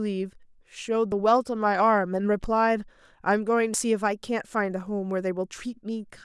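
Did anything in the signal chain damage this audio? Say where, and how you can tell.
Yes. At 1.12 s, 2.44 s and 3.74 s the speech jumps forward with no gap, losing about 20 ms, 20 ms and about 70 ms. The likely cause is a dropped buffer (overrun) at the driver or buffer stage: the capture side fell behind, the hardware overwrote unread samples, and the ends were spliced together. An underrun would instead insert a short silence or repeat, not skip ahead.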